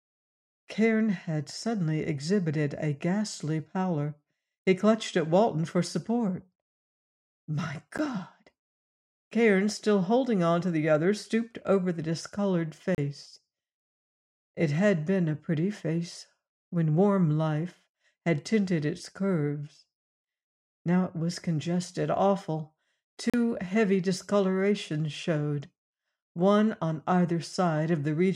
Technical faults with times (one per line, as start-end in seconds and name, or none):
7.98 block of digital silence
12.95-12.98 block of digital silence
23.30-23.34 block of digital silence